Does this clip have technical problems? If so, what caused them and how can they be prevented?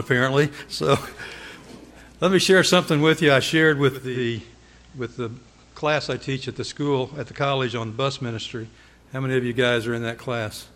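Yes. From 3.88 s to 9.09 s the receiver is in digital radio blending to analogue: it cross-fades over 393 ms to the FM broadcast, so the level drops about 3 dB and hiss rises to roughly 35 dB below the signal. Preventing it means improving reception with a better aerial or placement so the digital signal holds.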